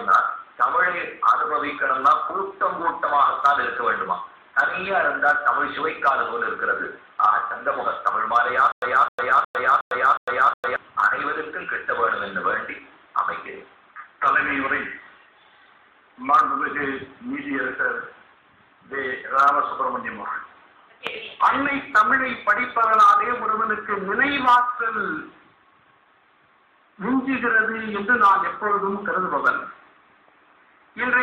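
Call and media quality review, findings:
Stutter with silent gaps, 8.72–10.76 s. A 260 ms fragment replays five times at a steady 363 ms period, each followed by 104 ms of dead digital silence. Likely a player or stream stall retrying its last buffer. Audio for that span is lost. The identical repeated burst separates it from plain dropouts, which only leave gaps.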